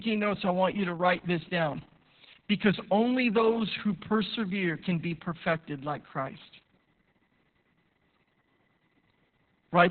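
From the first moment to the last, the speech carries heavy Opus voice compression. Opus is running in its SILK speech mode at a very low rate, which fits about 6 kbps. The band has been cut to narrowband, with nothing above 4.2 kHz. The voice sounds muffled and boxy. The excitation is coded coarsely, so it turns hoarse and slightly robotic. The codec uses long 60 ms frames.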